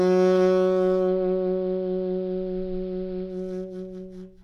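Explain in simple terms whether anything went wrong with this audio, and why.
Between 0.94 and 3.47 s the music turns dull and picks up a faint hiss. That's digital radio blending to analogue: the radio lost its digital signal and eased over to the AM broadcast, then faded back. Each crossover takes about a quarter of a second.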